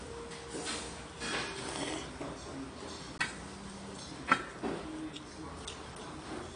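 AAC compression runs through the whole recording of sounds. Nothing reaches above 9.8 kHz, and the smeared, warbling texture is plainly audible, likely from AAC-LC coding at a low bitrate near 32 kbps.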